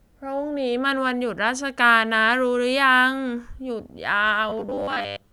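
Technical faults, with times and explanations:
4.50 to 5.33 s, robotic sound from repeated short buffers: the speech becomes a rigid metallic buzz at 100 Hz, likely from a 10 ms stretch replayed while about half the real audio is skipped. Unlike a stutter or dropout, the fixed pitch only roughly follows the voice.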